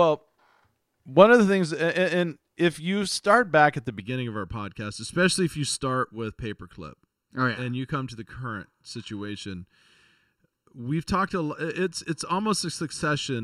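Speech that turns hollow and phasey from 4.00 s to the end, a channel delay (comb filtering) fault. One channel runs late by just under a millisecond, and summing to mono cuts evenly spaced notches from around 700 Hz upward. A spectrogram shows steady dark horizontal stripes.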